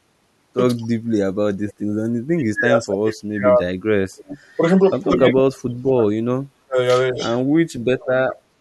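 A speech recording with two separate faults typical of a hands-free call. From 0.78 s to the end, the speech suffers speech suppressed in double talk. The level repeatedly sinks, in places by around 40 dB, and the high end thins or drops out in fragments, adding up to roughly five seconds of damaged audio. The likely cause is an echo canceller that heard both ends talking at once, could not separate the near talker from loudspeaker echo, and attenuated everything. Echo leak appears at 4.17–4.38 s, 4.96–5.06 s and 7.18–7.39 s as a copy of the speech trailing it by 257 ms. It sits about 20 dB, 35 dB and 15 dB below the speech, so the third burst is the most audible. The consistent delay points to a single return path, likely a speakerphone whose canceller let part of its microphone pickup through and sent it back.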